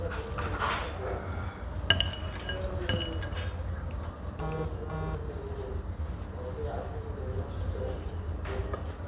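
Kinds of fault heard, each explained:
Short concealed packet loss: About 30 ms of audio failed to reach the decoder in time, around 6.02 to 6.08 s. The receiver bridged the gap by extending the preceding sound, reusing its periodicity or substituting shaped noise, then crossfading back into the real signal. The result is a brief smear or wobble rather than a hard dropout, heard within the narrowband sound of the call path, which has nothing above 4 kHz.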